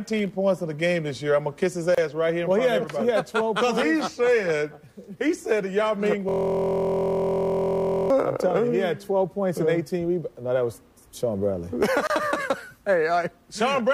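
At 1.95 s the sound drops out for about 30 ms before resuming where it stopped. This is a gap at a join of encoded pieces, where encoder start delay and end padding were left in. From 6.29 to 8.10 s a steady buzz at 43.1 Hz replaces the sound. This is a system hang loop: the hardware cycled one 23.22 ms chunk, which fits a 1024-sample buffer, while the system froze. The same 30 ms join gap recurs at 12.07 s.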